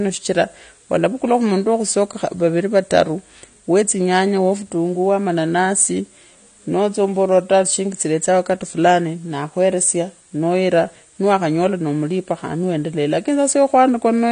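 Throughout the speech, nothing sounds above 9.7 kHz, and the voice comes across dull and smeared with a plainly audible fizzy, warbling texture on sibilants. A spectrogram shows a hard ceiling. The likely cause is AAC compression, consistent with AAC-LC at around 32 kbps.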